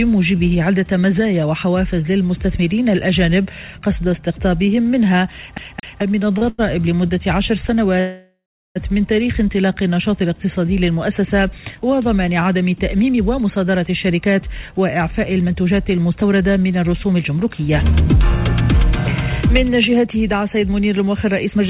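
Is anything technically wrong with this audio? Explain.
Yes, there are a few, all heard through a narrowband call path with nothing above 4 kHz, which fits G.711 mu-law at 64 kbps.

From 5.58 to 6.01 s there's a CD stuck on one turn: the laser jumps back a track, so a 0.22 s slice repeats twice with tiny mutes.

Right after come two short stalls from a late packet, at 6.38 s (33 ms) and 6.49 to 6.60 s (91 ms). The buffer ran dry and the last sound got stretched, so it hangs slightly.

From 8.00 to 8.77 s there's a call audio freeze, likely from delayed packets emptying the jitter buffer. The sound smears into a fading buzz or hiss, then about 0.36 s of silence, before picking up where it left off.

Finally there's a jitter buffer speed-up, from 12.95 to 18.89 s at 110% and from 19.48 s to the end at 108%. The receiver trimmed short pitch-period chunks, around half a second and a fifth of a second in total, to cut the delay. 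It sounds hurried but keeps the same pitch.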